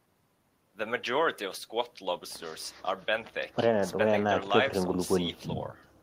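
No technical faults can be heard in this recording.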